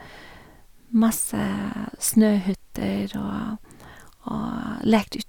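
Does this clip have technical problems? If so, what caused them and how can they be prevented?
No, there's nothing technically wrong to hear in this speech clip, so there's no cause to track down or anything to prevent.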